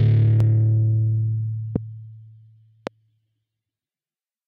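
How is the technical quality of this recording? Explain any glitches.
Three loud pops mar the recording, at 0.40–0.43 s, 1.76–1.78 s and 2.87–2.89 s. Each is a single sharp click over the continuing sound, the first a little above its level, the later two clearly louder. They likely come from a brief voltage spike.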